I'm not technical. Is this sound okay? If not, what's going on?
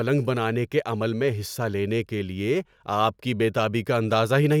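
Yes, nothing in this speech recording stands out as a technical fault.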